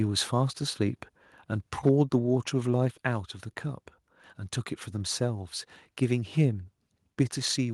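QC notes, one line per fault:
1.86–1.89 s, microphone overload: a brief harsh crackle on a loud peak, its tops flattened about 1 dB past the converter's limit, likely from input gain set too high.
1.89 s and 2.88 s, microphone volume stepped down: the sound and background drop abruptly, by about 2 dB right after that distorted peak and about 3 dB later, likely from call software cutting the input gain.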